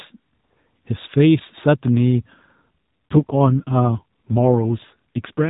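AMR rate drop from 3.10 s to the end of this speech clip: the speech, already capped below 4 kHz by AMR narrowband mobile coding, turns rougher and more synthetic with no gap and no change of bandwidth. That points to the network stepping the codec down from 12.2 to 5.9 kbps, cutting the bits spent on speech to protect the signal over a weak radio link.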